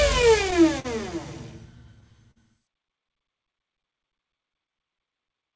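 The audio passes through a call codec that fits G.722, with nothing above 8 kHz. Clock drift between sender and receiver runs through the whole clip. The sender's clock seems about 3 percent slow, so the receiver keeps patching with small repeated pieces, giving recurring timing hiccups. A short stall from a late packet holds the sound from 0.80 to 0.86 s, stretched about 46 ms before it resumes. A second stall does the same from 2.31 to 2.38 s, held about 45 ms. Scattered short gaps follow between 3.8 and 4.72 s. About four tiny holes are filled by continuing the last sound, leaving brief ticks and smears.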